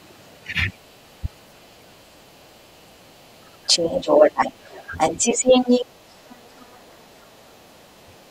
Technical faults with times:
0.22-8.24 other side's voice leaking through
0.34-0.49 speech suppressed in double talk
1.21-1.97 speech suppressed in double talk
2.50-2.65 speech suppressed in double talk
4.56-5.24 speech suppressed in double talk
6.55-6.62 speech suppressed in double talk
7.72-8.19 speech suppressed in double talk

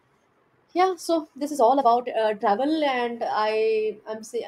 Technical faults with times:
0.00-2.60 time-stretched section

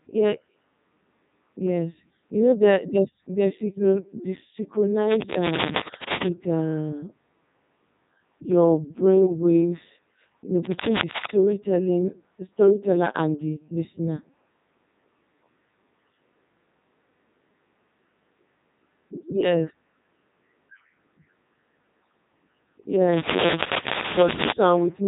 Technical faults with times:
0.00-25.07 Codec 2 vocoder

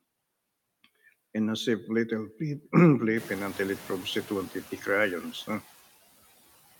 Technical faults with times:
0.00-6.80 noise suppressor artifacts
3.16-4.30 noise suppressor catching up

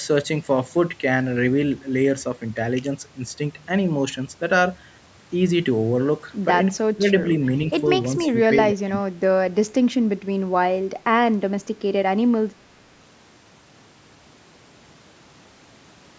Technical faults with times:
6.94-7.28 speech suppressed in double talk
8.75-9.10 speech suppressed in double talk

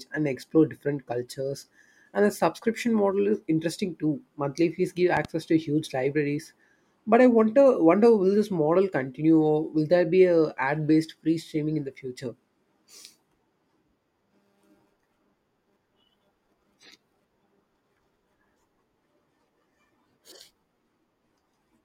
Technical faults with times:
5.17-5.27 loud pop

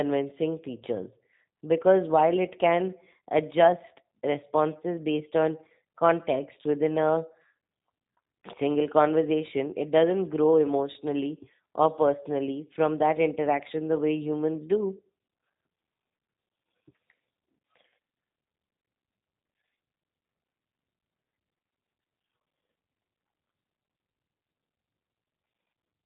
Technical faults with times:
0.00-26.05 G.729 codec

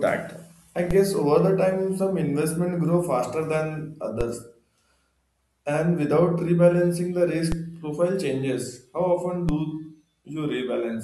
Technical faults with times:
0.91 DC step
4.21 DC step
7.52 DC step
9.49 DC step

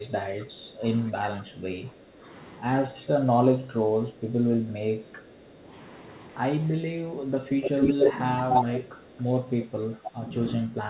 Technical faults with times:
0.00-2.26 speech suppressed in double talk
2.91-5.69 speech suppressed in double talk
6.60-8.28 speech suppressed in double talk
7.63-8.13 echo leak
8.49-9.23 echo leak
9.61-10.18 echo leak
9.94-10.11 speech suppressed in double talk
10.68-10.73 echo leak

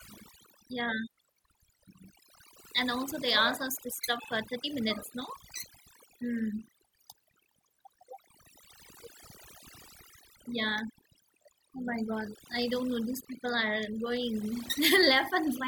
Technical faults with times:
0.00-15.67 overdone noise removal

